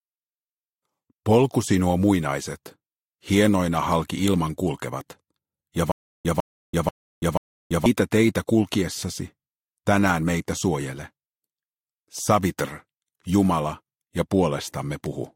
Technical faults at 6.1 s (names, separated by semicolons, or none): stutter with silent gaps